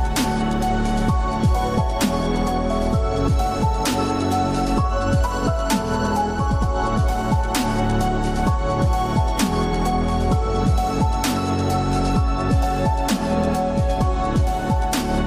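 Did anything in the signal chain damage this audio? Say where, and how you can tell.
No, nothing along the signal chain has audibly damaged this audio, and the signal holds steady with no stage leaving a mark on it.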